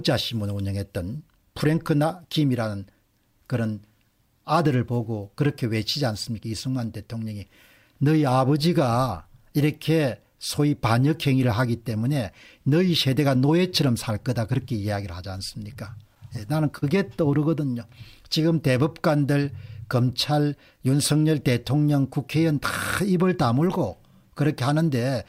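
Repeated stalls (stutter) from 16.15 to 16.84 s: packets arrived late, the jitter buffer kept emptying, and four brief stalls, the longest 40 ms, stretched the last sound, making the audio drag.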